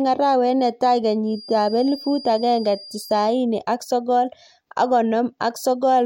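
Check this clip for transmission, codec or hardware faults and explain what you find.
One fault: a feedback whistle from 1.21 to 3.39 s, ending just before "ak sogol ak". A thin 4.8 kHz tone sits well below the speech, swelling and fading slowly, likely from a loudspeaker-to-microphone loop held at the edge of feedback. A spectrogram shows one steady horizontal line.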